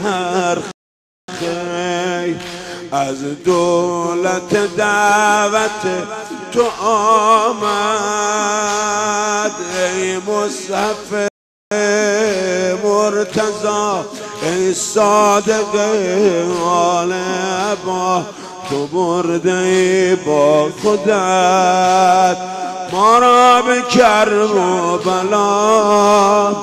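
At 0.71 s the sound drops to silence for 0.57 s, then picks up exactly where it stopped. This is a rebuffering stall. The player ran out of downloaded audio and waited for more. Nothing is skipped. At 11.28 s it happens again, adding 0.43 s of silence.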